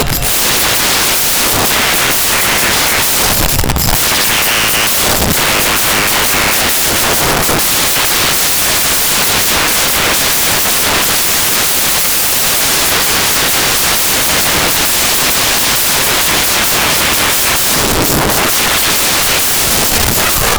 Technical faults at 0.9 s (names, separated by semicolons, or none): samples built from the wrong bytes